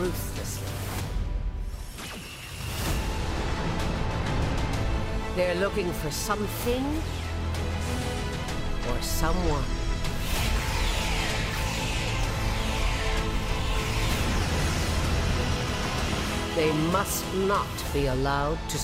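At 6.94 s there is a corrupt frame decoded. A couple of compressed frames arrived with flipped bits, and the decoder played them anyway. Misread gains and codes put energy at the wrong frequencies. The result is a brief chirp, peaking around -25 dBFS. The same fault returns from 18.38 to 18.40 s, this time in what sounds like a single damaged frame. It gives another short, squeaky blip at a similar level.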